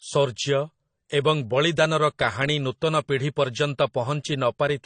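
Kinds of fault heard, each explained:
Transcoding between lossy codecs: throughout, the speech has nothing above 10 kHz and layered artefacts, likely from MP3 around 50 kbit/s re-encoded as AAC-LC near 32 kbit/s, stacking both codecs' artefacts.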